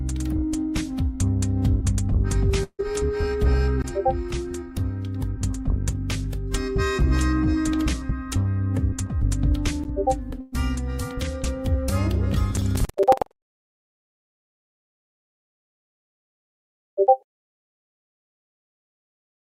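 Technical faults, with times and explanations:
2.63 to 2.81 s, long network dropout: The stream likely stalled. The last sound is stretched into a buzzing or hissing, fading tail for about 150 ms, the last roughly 70 ms of it near-silence, before the audio returns, with about 160 ms of material skipped entirely.
10.41 to 10.54 s, burst of packet loss: A short run of packets never arrived in time. The receiver smears the preceding sound forward and lowers it for about 113 ms, then jumps ahead. Roughly 120 ms of audio is gone, with no silent gap.
12.53 to 15.58 s, buffer tearing: The writing and reading positions in the output ring buffer overlap. In each period, a small share, around a sixth, is replaced by audio from about a tenth of a second earlier. The hard splices produce a rattling buzz near 21.5 Hz, which fits a 2048-sample buffer.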